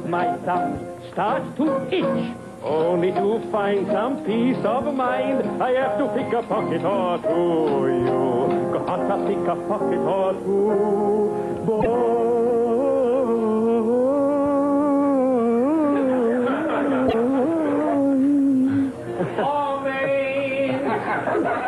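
Two short bursts of damaged data in a compressed stream interrupt the audio, from 11.77 to 11.86 s and from 17.05 to 17.14 s, each lasting just under a tenth of a second. At both points corrupted bytes in the encoded data leave the decoder misreading frames and losing sync until it finds a valid frame header again. Each event is a brief disruption with a span of disturbed sound.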